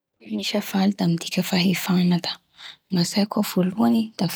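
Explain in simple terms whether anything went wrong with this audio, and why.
Nothing went wrong here, as far as listening can tell: the speech comes across steadily with no glitches, gaps or odd noises anywhere along the way.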